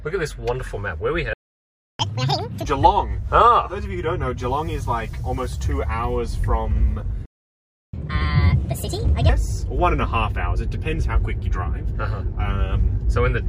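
At 1.33 s the sound stops mid-flow for 0.66 s: a playback stall, likely the player running short of data. It is a sustained silence, not a brief click or dropout.

From 2.00 to 2.65 s comes catch-up at higher speed. The backlog plays at 2x, with pitch up roughly ten semitones, before returning to normal.

A second stall runs from 7.25 to 7.94 s (0.68 s), with the same likely cause. Its catch-up runs at 1.5x, about seven semitones high, until 9.29 s. Pitch rising together with tempo sets this apart from a pitch-preserving time-stretch.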